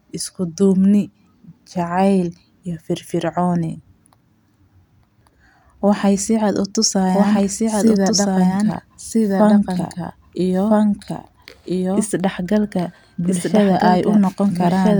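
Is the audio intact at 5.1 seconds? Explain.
Yes, the audio at 5.1 seconds is intact, with no audible fault at that moment.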